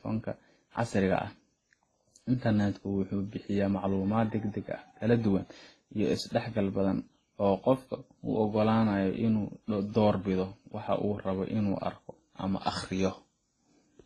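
Across the whole speech clip, nothing is present above 12 kHz, and artefacts from several lossy stages are heard together. The likely cause is transcoding between lossy codecs, each pass re-encoding earlier damage, consistent with a low-bitrate chain ending in Opus.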